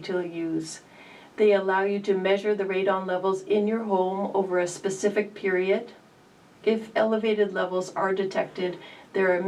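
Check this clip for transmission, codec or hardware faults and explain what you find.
No transmission, codec or hardware faults turn up in this clip.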